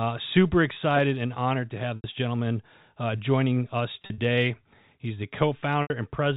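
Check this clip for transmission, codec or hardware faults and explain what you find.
Three dropouts from packet loss with pitch repetition occur in this clip.

At 1.96 to 2.04 s (between "and honored to have" and "gentleman uh joining us"), 4.02 to 4.18 s (after "gentleman uh joining us") and 5.82 to 5.90 s, the receiver bridges missing audio by repeating the last pitch period. The 80 ms gaps fade into silence, and speech returns with a short cross-fade. The 80 ms gaps fit four 20 ms packets. The middle one scatters 100 ms of loss over 160 ms, in runs of at most 40 ms, each a brief, buzzy held tone.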